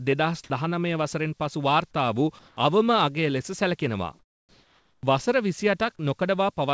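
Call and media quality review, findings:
Sound dropped by the voice detector, 0.44–0.50 s: sound cuts out for 60 ms and steady noise fills the gap, with about 30 ms of real sound lost. Likely the sender's voice detector misread the low-level sound as background, so transmission stopped and comfort noise was substituted.

Comfort noise in place of the background, 2.39–2.57 s and 4.19–5.03 s: the background, about 37 and 41 dB below the loud passages, flattens into featureless hiss. The level shifts about 1 dB at the first and drops about 6 dB at the second. Likely discontinuous transmission, with synthetic noise standing in for the real background.

Onset clipped by the voice detector, 5.01–5.03 s: the returning sound starts abruptly, its first 20 ms missing and noise-filled. Likely the detector reacted late to the restart. Nothing above 8 kHz anywhere, consistent with a G.722 wideband call path.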